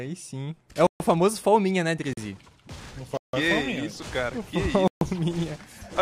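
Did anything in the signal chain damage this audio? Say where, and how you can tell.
Yes. Blocks of digital silence at 0.87–1.00 s, 2.13–2.17 s, 3.17–3.33 s and 4.88–5.01 s, each 40 to 160 ms, point to the driver or buffer stage. When output isn't filled in time, silence replaces the sound. The sound cuts out and back with no fade, unlike a faded or concealed dropout.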